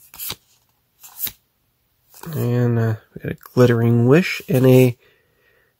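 No technical faults can be heard anywhere in the clip. Nothing in the audio points to a problem in how it was captured, processed or delivered.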